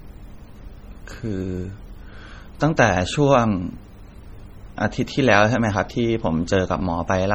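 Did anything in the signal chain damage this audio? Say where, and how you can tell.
Yes. Throughout the whole speech clip the sound has a watery, swirling quality, with metallic chirps on s sounds and smeared consonant onsets. The stage is the codec, likely heavy MP3 compression at a low bitrate around 32 kbps. With too few bits, the encoder drops treble and zeroes quiet frequency lines that blink on and off between frames. A plain low-pass filter would dull the top but leave no chirping or swirl.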